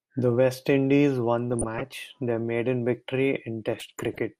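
MP2 compression runs through the whole recording. The speech sounds dull and granular, with a gurgle, which points to MPEG Layer II coding at a low rate, likely around 80 kbps. The coder divides the spectrum into 32 sub-bands and rations bits among them. Starved of bits, it drops the upper bands or lets them flicker in and out, and quantises the remaining ones coarsely. That loss of top end and the grainy texture are plainly audible.

DAB burbling appears twice, from 1.53 to 1.94 s and from 3.72 to 4.19 s. Bit errors, on the order of a few tenths of a percent, have slipped past error correction into the MP2 data across a run of consecutive frames. Corrupted samples put short blips of noise into single sub-bands, and corrupted scale factors make sub-bands jump in level for up to a frame. The result is a burbling disturbance laid over the speech.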